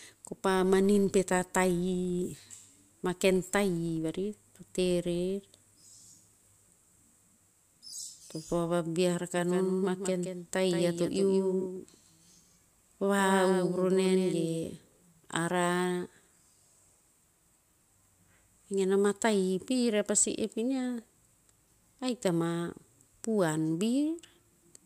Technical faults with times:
0.00-7.93 filter restarted on every block
9.36-14.64 doubled audio track

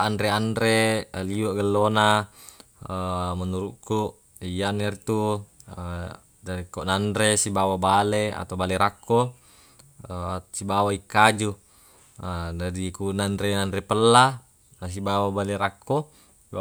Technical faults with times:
none

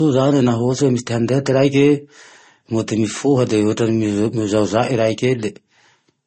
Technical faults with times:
0.00-6.26 transcoding between lossy codecs

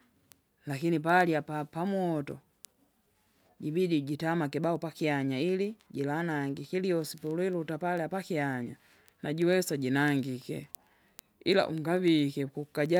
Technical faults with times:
0.21-12.97 word clock ticks

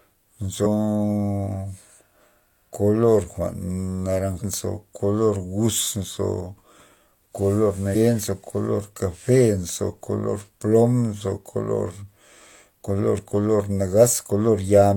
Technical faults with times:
0.62-0.67 compressed frames skipped
4.37-4.42 compressed frames skipped
7.91-7.96 compressed frames skipped

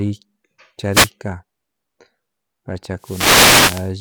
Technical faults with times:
0.91-1.10 wireless microphone noise hit
2.98-3.93 wireless microphone noise hit

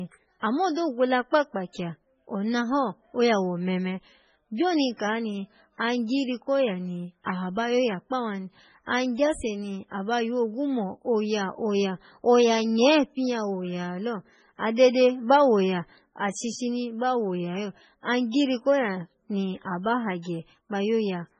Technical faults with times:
0.00-21.39 MP3 compression

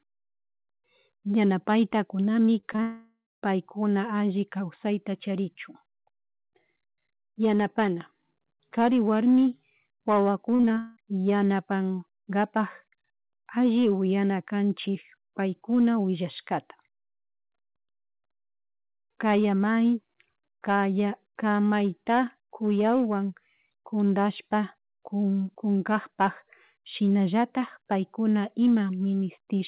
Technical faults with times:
2.46-2.80 repeated packet loss (robotic sound)
2.82-3.44 long network dropout
10.56-10.98 repeated packet loss (robotic sound)

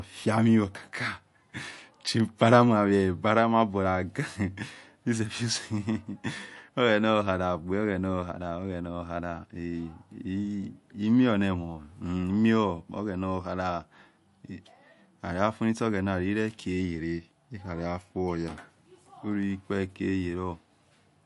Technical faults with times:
0.00-21.25 MP3 compression

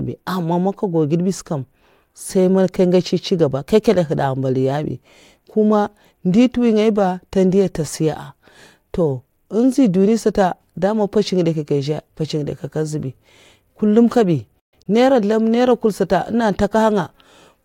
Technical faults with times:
14.59-14.86 Bluetooth dropout

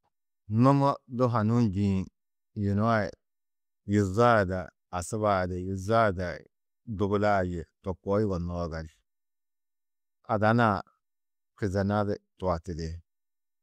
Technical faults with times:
none

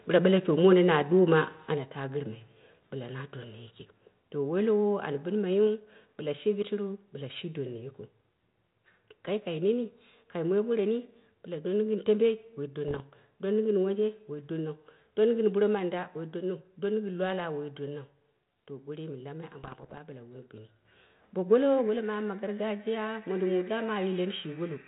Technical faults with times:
0.64-0.73 microphone overload
0.73 microphone volume stepped down
1.74 microphone volume stepped down
12.88-13.01 bit errors on an ADPCM link
19.64-19.98 bit errors on an ADPCM link
20.85 microphone volume stepped up
21.87 microphone volume stepped down

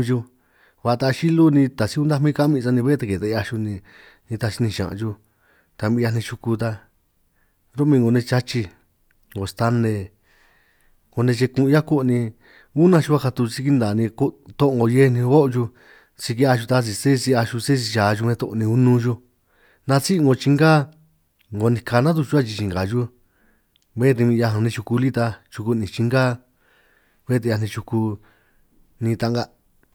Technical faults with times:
none

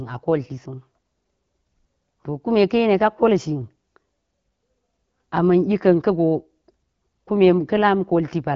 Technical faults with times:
none

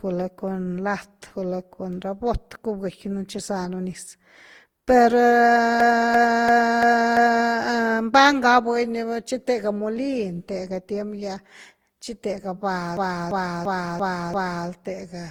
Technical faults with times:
0.00-15.31 generation loss
5.80-7.51 system hang loop
12.97-14.68 system hang loop

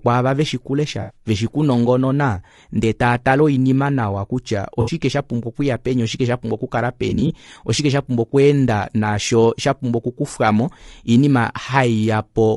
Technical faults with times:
0.00-12.57 low-delay AAC compression
1.01-1.16 AAC frame loss with concealment
4.81-4.91 AAC frame loss with concealment
7.09-7.31 AAC frame loss with concealment

